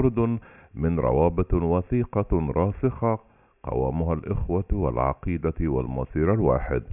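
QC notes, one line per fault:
Nothing stood out on listening to the speech in this clip.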